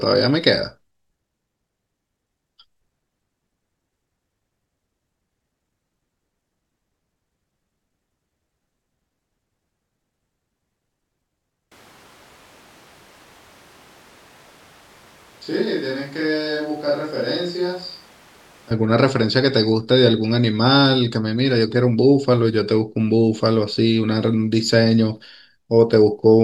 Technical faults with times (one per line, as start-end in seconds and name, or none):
11.72-18.71 switch to a distant microphone